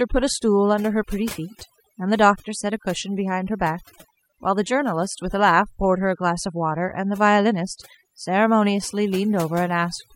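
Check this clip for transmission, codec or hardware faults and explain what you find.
One fault runs through the whole speech clip: overdone noise removal. A noise reduction stage was set far too aggressively, so any frequency band whose level came close to its noise estimate got pulled down hard or switched off, and the softer parts of the speech fell below that line along with the noise. The result is a lowered background that breaks up into twinkling, warbling specks.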